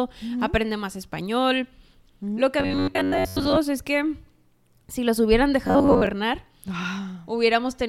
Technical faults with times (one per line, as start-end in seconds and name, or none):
2.60-3.58 robotic sound from repeated short buffers
5.67-6.07 robotic sound from repeated short buffers